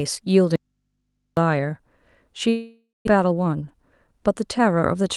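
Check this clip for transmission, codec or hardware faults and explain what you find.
There are three separate faults: two dropouts in the first half or so of the clip, plus a catch-up stretch near the end.

From 0.56 to 1.37 s the speech drops out to a faint hum. That's an audio dropout to a faint residue, lasting about 0.81 s. The wanted signal vanishes abruptly, but the chain after the break stays live, so instead of true silence you hear mains hum sitting about 50 dB below the normal level. The likely cause is a broken connection or lost source feeding an open input.

Between 2.49 and 3.09 s there's a long network dropout. The receiver keeps the last bit of sound going as a buzzy or hissy tail that fades out. That fill runs about 0.58 s and ends in roughly 0.2 s of silence. When the speech comes back, about 0.4 s of it is simply gone. Packets likely stopped arriving for a stretch, and the delay through the link shifted by something like 150 ms in the process.

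From 3.17 to 5.09 s you get a jitter buffer speed-up. The speech runs at about 107% speed with the pitch unchanged, so it sounds a bit hurried. The receiver is trimming short pitch-period chunks over and over to drain a buffer that's holding too much audio, and in total it cuts something like 150 ms. That fits with clawing back the extra delay left over from the dropout.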